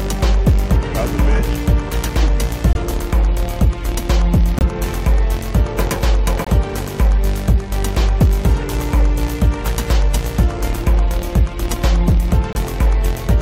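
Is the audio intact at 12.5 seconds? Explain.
No. A corrupt frame muted the audio from 12.53 to 12.56 s: the decoder rejected damaged data, likely two frames' worth, leaving an abrupt 38 ms silent gap.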